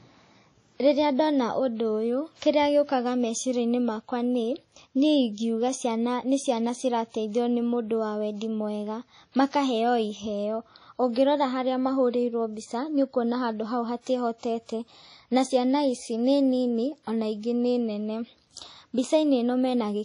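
From the start and throughout, the speech carries a ringing, washy coloration with a hiss that swells and fades with the signal, and nothing survives above about 10.1 kHz. The likely cause is WMA compression at a low bitrate, around 32 kbps. Quantisation noise spread over long transform blocks blurs each sound, and weak spectral lines are zeroed. Unlike a plain low-pass filter, which only dulls the top, this damage also rings and hisses within the band that remains.

At 14.38 s, right after "nĩ ũkuona handũ hau", a brief hiss of about 47 ms arrives before a sharp onset, and the attack itself sounds softened. This is pre-echo. The encoder spreads noise sized for the loud attack across its whole block, so the quiet gap ahead of it fills with hiss. A reverb tail or a true echo comes after a sound, while pre-echo comes before the attack it belongs to.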